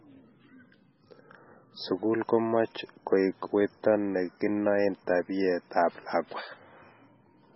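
From start to finish the speech carries heavy coding damage, likely from MP3 compression at a very low bitrate, around 16 kbps. Nothing sounds above 5.6 kHz, so the top end is simply missing and s sounds lose their edge. The encoder is starved of bits. It drops weak frequency lines and brings them back frame by frame. That gives a watery, swirling texture. Consonant attacks smear instead of landing cleanly.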